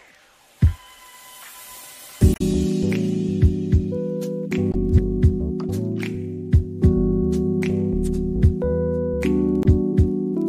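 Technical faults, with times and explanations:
2.31–2.41 s, 4.70–4.75 s and 9.62–9.66 s: damaged data in a compressed stream. Three short bursts of corrupted audio, lasting about 100 ms, 56 ms and 40 ms, break into the sound as brief chirps, squawks, clicks or short holes. At each point the compressed bytes no longer match valid frame data, so the decoder either produces garbage from the bad frame or discards it, loses synchronisation and outputs a blip until it locks onto the next intact frame header.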